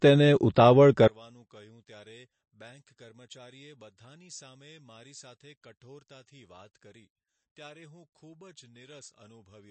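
MP3 compression runs through the whole speech recording: the treble stops dead above 8.3 kHz, and the plainly audible watery, swirling texture comes from weak frequency lines dropping in and out between frames, which points to a low bitrate of about 34 kbps. One channel inverted is the likely cause of the collapse from 1.08 s to the end. The level falls by about 31 dB because the sound common to both channels cancels in the mono sum, leaving only their small difference.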